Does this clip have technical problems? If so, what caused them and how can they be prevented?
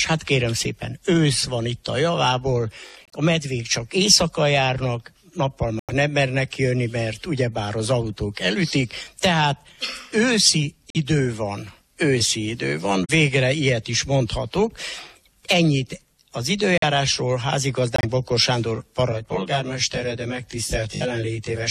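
Yes. Corrupt frame muted: the sound drops abruptly to silence at 3.05–3.14, 5.79–5.90, 10.90–10.97, 13.05–13.10, 16.78–16.83 and 17.96–18.05 s. Damaged compressed frames were rejected by the decoder and replaced with silence. These show as sharp-edged flat gaps in the waveform and blank vertical strips on a spectrogram. Prevent this with error-protected transport, checksums, or retransmission.

Channel delay (comb filtering): from 19.12 s to the end, one channel lags by roughly 20 ms and the two are summed to mono. This makes the sound rough or slightly doubled. On a spectrogram, evenly spaced dark horizontal notches start near 30 Hz. Prevent this by aligning the channels before any mono fold-down.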